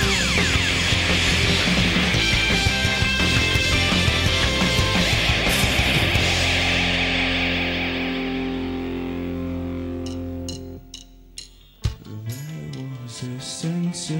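No technical faults are audible.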